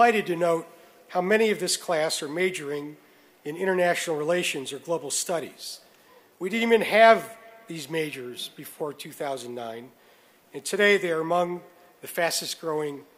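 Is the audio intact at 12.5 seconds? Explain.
Yes, the audio is intact at 12.5 seconds, with no dropout, click, distortion or other fault at that point.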